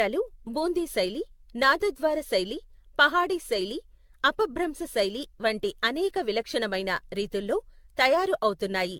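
From start to finish, the speech carries generation loss. Nothing sounds above 17 kHz. The tone is swirly and hollow, with a smeared, watery quality. Consonant attacks blur rather than snap. The likely cause is a lossy codec applied over and over, about ten times, in a chain that points to AAC-LC at around 96 kbit/s. Each new encode quantised on a shifted frame grid. Noise and spectral holes stacked up, making the sound worse than that bitrate alone would.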